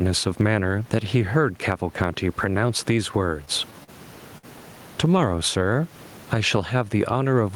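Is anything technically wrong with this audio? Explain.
Yes, the speech has three kinds of fault.

Gain pumping runs through the whole clip. The input gain is likely set far too high, so a fast limiter clamps down on every loud syllable. The level swings by around 15 dB, and the room noise sits about 35 dB below the speech.

Short stalls from a late packet occur at 3.84 to 3.90 s and 4.38 to 4.45 s. Each time, a packet arrived late and the jitter buffer ran dry. The receiver held the last sound for 42 ms and then 53 ms before resuming, so nothing is lost but a sound briefly hangs with a slight buzz or dip.

A jitter buffer slow-down runs from 5.35 to 5.74 s. The receiver repeated pitch periods to rebuild its reserve, adding 42 ms. The speech plays at about 92% speed at unchanged pitch, sounding drawn out.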